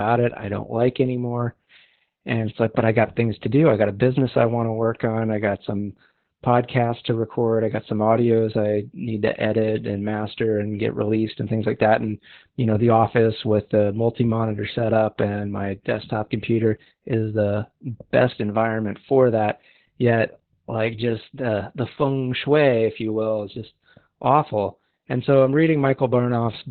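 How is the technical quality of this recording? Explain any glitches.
The recording is heavily degraded by Opus voice compression throughout. The codec runs its SILK speech coder in narrowband mode, cutting everything above about 4 kHz and coding the excitation coarsely, which points to a bitrate around 8 kbps. The speech sounds muffled, hoarse and slightly robotic.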